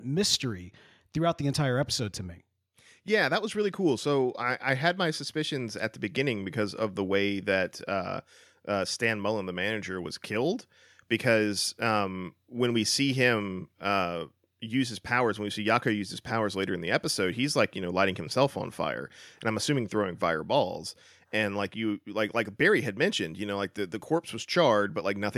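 No technical faults are audible.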